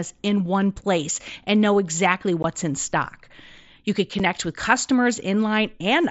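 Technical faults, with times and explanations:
2.43 s and 4.19 s, unconcealed Bluetooth headset packet loss: a 15 ms hole between "place and know exactly" and "in stock", then a 7.5 ms one, consistent with two and one lost 7.5 ms mSBC frames. Nothing filled the gaps, so the sound drops out abruptly at hard edges.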